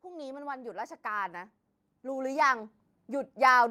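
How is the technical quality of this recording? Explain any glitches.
Automatic gain rising from 0.05 to 3.38 s: the gain control judged the input too quiet and kept raising its gain, by about 11 dB overall. The speech and the background noise swell together steadily, so the room tone grows as the voice gets louder.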